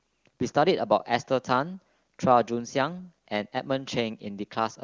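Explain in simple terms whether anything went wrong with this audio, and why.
Nothing went wrong: the speech passed through an AMR wideband (HD Voice) phone codec running at its highest-quality setting, where any coding effect is faint at most, and no fault can be heard anywhere.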